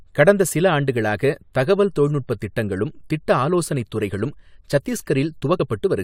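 Damaged data in the compressed stream at 5.56 to 5.60 s: corrupted frames throw the decoder out of sync, producing a brief glitch in the speech.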